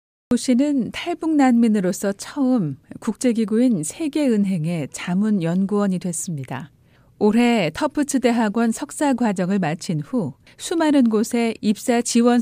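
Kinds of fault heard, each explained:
Cut-off start: The speech begins abruptly at about 0.31 s, after roughly a third of a second of dead digital silence, entering mid-sound with no natural attack or fade-in. The recording or stream started late, catching the sound already underway.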